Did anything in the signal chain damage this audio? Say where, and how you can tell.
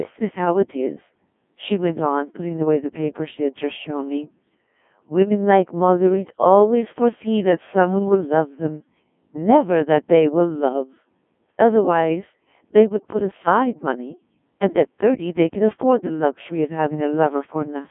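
Yes. The damage happens at the codec stage, across the whole speech clip. This is the Codec 2 vocoder. The speech sounds robotic and buzzy from start to finish, and heavily degraded. The band runs only from 200 Hz to 3.5 kHz, with nothing above 3.7 kHz. The decoder never keeps the original waveform. It rebuilds each sound from sine waves, using only pitch, voicing, energy and a rough spectral shape. The heavy loss points to a very low bitrate, around 1.6 kbit/s.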